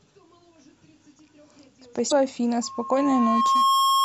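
At 2.08 to 2.12 s the speech breaks up briefly because of damaged data in the compressed stream. Corrupted bytes left the decoder unable to read those frames, so it lost sync and hunted for the next valid frame header. On a spectrogram this is a brief disruption with a visible discontinuity on either side. The waveform shows an abrupt, jagged splice where the speech envelope jumps.

From 2.62 s to the end, a loudspeaker feedback squeal at 1.1 kHz rises out of the speech. A microphone was hearing the loudspeaker it feeds, and at that one frequency the loop gain exceeded unity, so the tone kept reinforcing itself. It swells over roughly a second and ends up about 5 dB louder than the speech. A spectrogram shows a single bright horizontal line at 1.1 kHz that thickens and brightens. The waveform's envelope grows into a steady, dense sinusoidal band.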